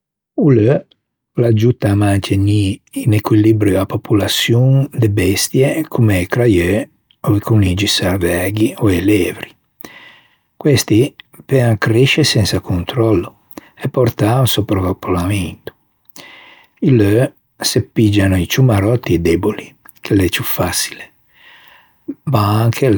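Nothing technically wrong turns up anywhere in this bit of speech, so there's no fault to point to and no cause to explain.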